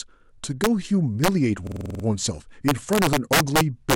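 At 0.64 to 0.67 s and 1.24 to 1.28 s the speech hits integer overflow: peaks pushed about 1 and 2 dB past full scale wrap to the opposite sign instead of being limited, giving sharp cracks harsher than clipping. On a waveform the tops jump straight to the far rail; a spectrogram shows thin full-band vertical streaks.

From 1.67 to 2.04 s a system hang loop repeats one 46.44 ms slice eight times, a 21.5 Hz machine-gun stutter that fits a 2048-sample buffer, with little or nothing of the speech lost. The waveform shows identical copied blocks; the spectrogram shows a pattern tiling at regular intervals.

Integer overflow returns from 2.68 to 3.94 s, driven about 5 dB over, the hardest of the three, so peaks past the limit wrap again into sharp cracks.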